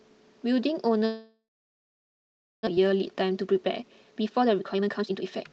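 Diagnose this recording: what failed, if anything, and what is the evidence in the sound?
Network: from 1.05 s to 2.69 s the sound decays into a fading buzz, then near-silence, and resumes with a stretch missing, likely a long network dropout.

Jitter buffer: from 2.77 s to the end, speech runs 22% fast at unchanged pitch. This jitter buffer speed-up trims pitch periods to shed roughly 0.7 s of backlog.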